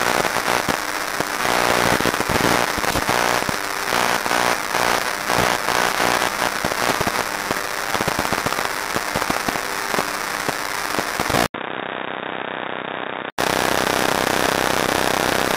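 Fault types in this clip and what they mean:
DECT cordless phone buzz: a nearby DECT unit's radio bursts every 10 ms get rectified into a thin 100 Hz buzz throughout, roughly 15 dB under the sound.
Input switched to a poorer device: likely cause of the 11.46 to 13.38 s stretch, which goes dull above 3.8 kHz, drops about 10 dB, after an 80 ms gap.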